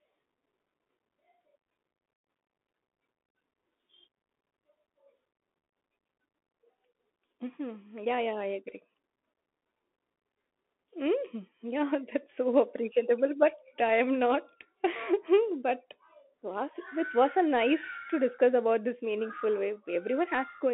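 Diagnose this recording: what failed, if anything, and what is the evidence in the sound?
Bluetooth CVSD headset codec throughout: speech is confined to about 250 Hz to 3.6 kHz, nothing above 3.8 kHz, with granular hiss and scratchy s sounds from one-bit adaptive-step coding.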